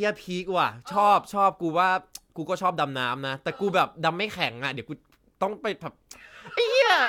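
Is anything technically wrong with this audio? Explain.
No, nothing technically wrong can be heard here.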